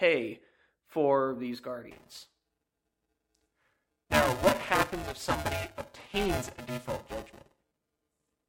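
Buffer tearing from 1.91 s on: writer and reader cross mid-buffer, so about half of each period replays older speech, giving a 375 Hz buzz.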